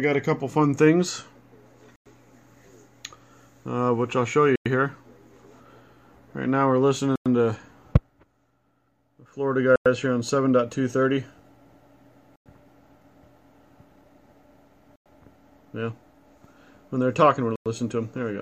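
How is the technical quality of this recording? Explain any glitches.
The recording keeps dropping out on a steady beat. It's a gap between chunks, 100 ms of silence at 1.96, 4.56, 7.16, 9.76, 12.36, 14.96 and 17.56 s. The audio arrives in 2.5 s chunks with dead air left at each join, so you hear clean, hard-edged holes every 2.6 s, but nothing actually goes missing.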